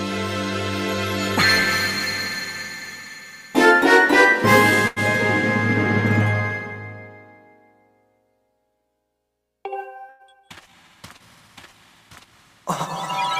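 At 4.87 to 4.99 s and again at 10.09 to 10.22 s, a burst of packet loss cut off the incoming stream. The receiver concealed each gap by stretching the last sound and letting it decay, about 88 ms of fill the first time and 101 ms the second, so the audio briefly smears into a held buzz or a fading hiss. Roughly 60 ms of material is then skipped each time, and playback resumes slightly later than before.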